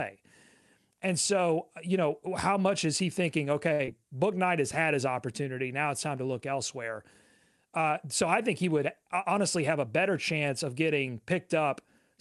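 Right after "much is he thinking", at 3.73 s, there's a short stall from a late packet. The jitter buffer ran dry because the next chunk of audio wasn't there in time, so the receiver stretched the last sound for about 61 ms, until 3.81 s, then picked up exactly where it left off. Nothing gets lost. You just hear that sound held a touch too long, with a faint buzz or dip, and the playout delay grows by the same 61 ms.

Then, from 3.85 to 3.89 s, still just after "much is he thinking", comes a short concealed packet loss. About 40 ms of audio never made it to the decoder. The receiver papered over the gap with roughly 20 ms of continued sound before blending back into the real signal, which trims the delay by around 20 ms. It comes across as a quick smear or wobble.

Later there's a jitter buffer speed-up, starting after "I think he would" at 9.02 s and running to 10.33 s, just before "of getting". 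The buffer was holding more audio than it wanted, so the receiver kept snipping out tiny pitch-period-sized pieces, about 50 ms in total. Playback runs about 4% fast at unchanged pitch. Underneath it all the Opus call path is doing its usual thing, with the top end cut off around 12 kHz.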